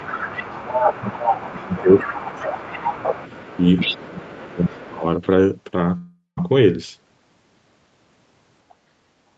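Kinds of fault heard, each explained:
Speech suppressed in double talk: the voice repeatedly sinks by roughly 10 to 20 dB while the far side talks, likely the echo canceller ducking both sides, longest from 1.51 to 3.09 s.
Other side's voice leaking through: a second, quieter voice sits roughly 10 dB under the talker for the first five seconds, likely loudspeaker echo the canceller never fully removed.
Long network dropout: around 5.97 to 6.39 s about 400 ms goes missing, likely lost packets, bridged by a fading fill and then a short silence before the audio resumes.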